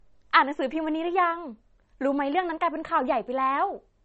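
Throughout the speech, the sound is dull and swirly, with nothing above about 8.2 kHz. On a spectrogram the energy stops at a hard horizontal shelf near 8.2 kHz, with smeared, blocky detail beneath it. The likely cause is low-bitrate audio saved at a high bitrate: an MP3 at a rate as low as 32 kbit/s was re-encoded at something like 256 kbit/s. The larger second file cannot restore the treble or detail the first encoding discarded.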